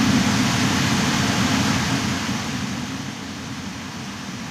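No technical faults can be heard in this recording of everyday sounds. The level rises and falls smoothly in places, like a fader being moved, without any steps or jumps.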